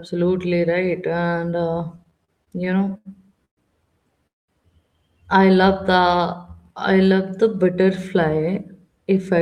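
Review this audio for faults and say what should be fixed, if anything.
Between 1.97 and 3.07 s the speech drags and stutters through repeated stalls, with 12 short holds (the longest 74 ms) filled by continuing the preceding sound. That totals 215 ms, about a fifth of the span, and nothing is lost. Packets kept arriving late, so the jitter buffer repeatedly ran dry.

Two call audio freezes break the flow. At 3.45 to 3.59 s a 119 ms hold ends in about 100 ms of silence, and at 4.27 to 4.50 s a 214 ms hold ends in about 200 ms of silence. Speech then resumes where it stopped. The likely cause is held-up packets emptying the jitter buffer, which added that delay each time.

From 5.69 to 7.30 s, just before "the butterfly", the speech runs at 91% speed with unchanged pitch, sounding drawn out. This is a jitter buffer slow-down: the receiver repeated pitch periods and pause fragments, adding 150 ms to rebuild its reserve.

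Right after "the butterfly", from 9.04 to 9.38 s, the speech hurries to about 110% speed at the same pitch. This is a jitter buffer speed-up: the receiver removed roughly 40 ms in small pitch-period cuts to shed excess buffered delay.

To prevent these, the network path's jitter and packet delay should be reduced, for example with QoS prioritisation of voice traffic, and the jitter buffer should be set with a steadier, adequately sized target delay.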